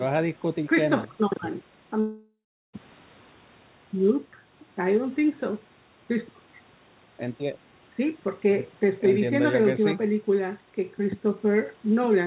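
At 2.00 s the speech smears into a fading buzz, then goes silent until 2.75 s and resumes with 0.74 s lost, likely from a long network dropout.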